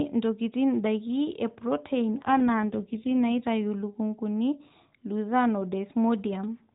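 From 2.20 s to 3.45 s the speech turns rougher and more synthetic, consistent with an AMR rate drop, likely from 12.2 kbps to about 5.9 kbps as the link shifts bits to error protection. The narrowband 4 kHz ceiling stays put, with no gap.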